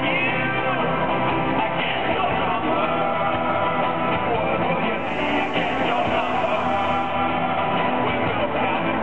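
Digital radio blending to analogue runs from 4.92 s to 7.20 s: over a 275 ms cross-fade the sound switches to the FM broadcast, bringing hiss roughly 35 dB down, then blends back. The level stays unchanged and the transition is smooth, with no mute or gap, which distinguishes it from a signal dropout.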